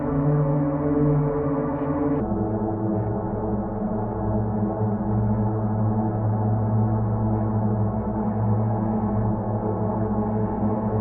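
From 2.20 s to the end, the sound plays as a section at the wrong speed: it runs at 0.744 times its proper rate, dropping pitch by roughly five semitones and stretching everything out. This is likely playback or editing against a mismatched clock.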